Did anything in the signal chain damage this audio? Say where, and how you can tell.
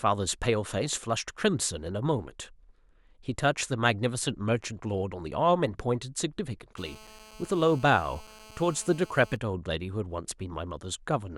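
Yes. Between 6.78 and 9.37 s a hard, raspy GSM phone buzz sits under the speech at about 23 dB below it, repeating at 217 Hz with a dense stack of harmonics. The damage is in the analogue wiring: a nearby 2G handset on a call pulsed its transmitter, and the audio circuit rectified those radio bursts. The steady buzz fits a call rather than data. Mains hum sits at 50 or 60 Hz and sounds smoother, not gritty.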